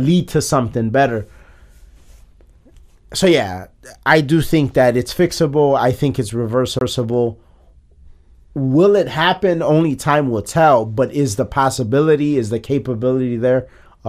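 Speech recording with a CD skip at 6.79 to 6.81 s, just after "fixable I think it's": a tick and a mute of about 20 ms, then playback resumes from a different turn of the disc's spiral.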